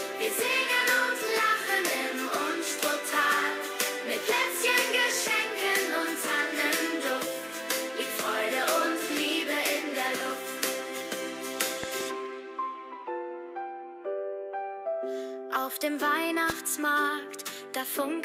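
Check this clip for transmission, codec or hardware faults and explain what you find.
There is a hardware fault: a loud pop appears twice. At 11.84 to 12.03 s, two pops about 10 dB above the sound are heard, then a single one about 15 dB above it at 16.50 to 16.52 s. This is likely a voltage spike from a plug, switch or static. The sound continues underneath each pop without a gap, which distinguishes it from a dropout click.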